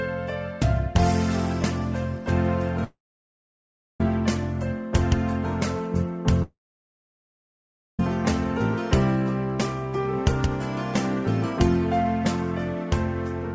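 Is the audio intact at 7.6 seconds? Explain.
No. At 7.6 s the sound is missing: a likely long network dropout from 6.43 to 8.00 s leaves a brief fading buzz, then a flat, blank gap in the waveform and spectrogram.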